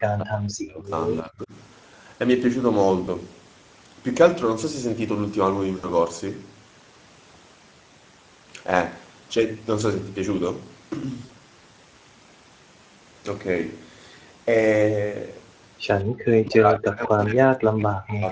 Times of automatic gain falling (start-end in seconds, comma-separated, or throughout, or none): none